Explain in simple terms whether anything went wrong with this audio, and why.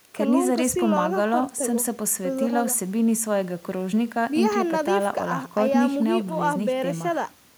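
Nothing went wrong here: the speech recording shows no technical faults, and the signal stays intact and continuous throughout.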